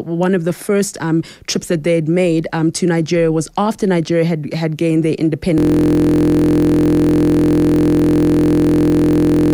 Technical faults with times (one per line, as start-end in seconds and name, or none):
5.58-9.54 system hang loop